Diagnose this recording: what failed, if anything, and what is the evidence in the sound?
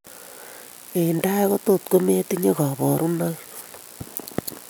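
Nothing failed; no fault is audible anywhere.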